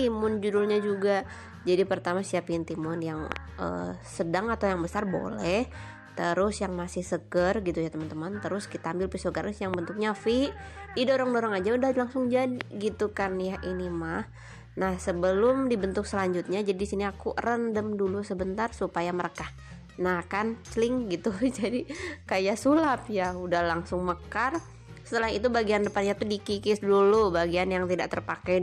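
Loud pops hit at 3.32 to 3.38 s as a quick double, then singly at 9.74 to 9.76 s and 12.61 to 12.63 s, each peaking roughly 20 dB above the surrounding audio while the sound continues underneath. They are likely sudden electrical steps or pulses, such as a plug, switch, static discharge or driver glitch, which the downstream circuitry turns into sharp transients.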